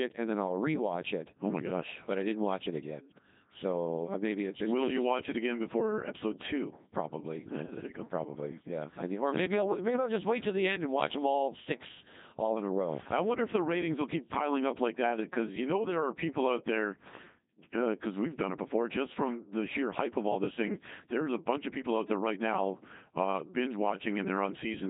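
Speech runs the whole way through a Codec 2 vocoder, heard as heavy, buzzy, robotic resynthesis with nothing above 3.8 kHz, which fits about 2.4 kbit/s. Unlike plain low-bitrate coding, the original waveform is gone: voiced sounds are rebuilt from sine waves.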